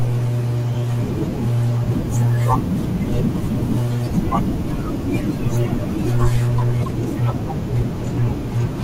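At 6.85 s the speech has a corrupt frame decoded. Flipped bits in one compressed frame were played anyway. Misread codes and gains put energy at wrong frequencies. The result is a brief chirp, squeak, blip or burst of noise, peaking around -25 dBFS, lasting one frame.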